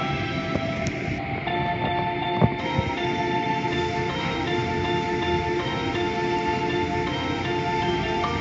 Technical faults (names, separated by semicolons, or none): none